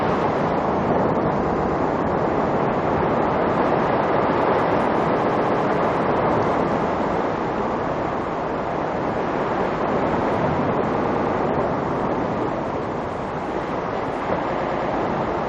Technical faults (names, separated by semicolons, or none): repeated frames